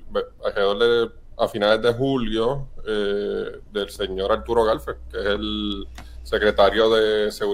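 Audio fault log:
3.96 to 6.79 s, mains hum: a steady 60 Hz drone with low harmonics, fairly strong against the sound, from a ground loop or nearby transformer leaking the power line in.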